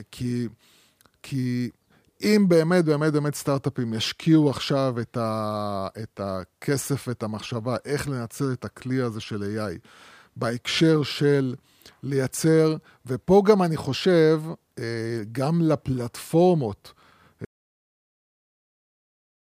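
An audio dropout to silence begins at 17.45 s and runs to the end of this speech clip, about 2.0 s of silence with no room tone. The input was likely lost, through a disconnected device, failed link or mute, while recording continued writing silence.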